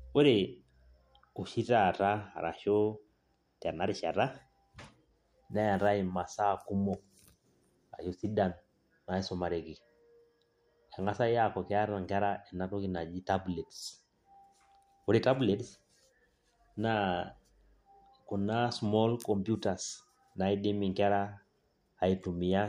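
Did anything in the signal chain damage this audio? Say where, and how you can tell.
No, nothing in the signal chain has left an audible mark on this speech recording. At no point does any stage from capture to playback reveal itself in the sound.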